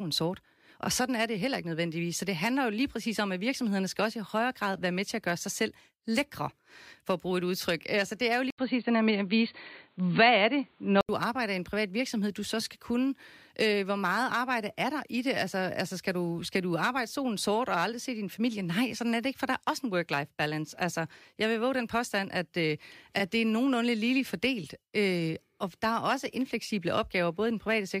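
Input switched to a poorer device in this speech clip, 8.50 to 11.09 s: after "det er jo" comes an 80 ms gap, then nothing above 4.5 kHz, a level shift of about 5 dB and new background noise, likely a different microphone, until "arbejder i en privat".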